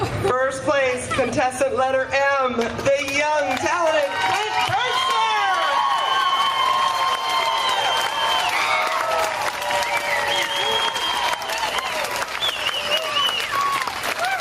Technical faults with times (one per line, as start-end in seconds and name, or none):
0.00-14.40 gain pumping